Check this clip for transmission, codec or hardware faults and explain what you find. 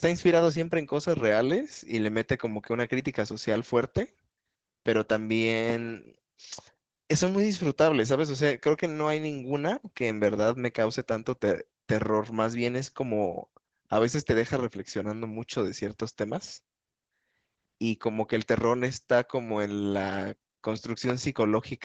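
Two faults are present: low-rate codec damage throughout the speech, and a single loud pop near the end.

Opus voice compression runs for the whole clip. The encoder, in its SILK linear-prediction mode with the band capped near 8 kHz, is short of bits, which fits a rate around 12 kbps. It codes the excitation coarsely, so the speech sounds plainly muffled, hoarse and slightly robotic.

A loud pop occurs from 21.10 to 21.12 s. A sudden electrical pulse, likely from a switch, connector or driver glitch, was added to the signal. It is heard as one sharp pop, very roughly 15 dB above the speech, which continues underneath.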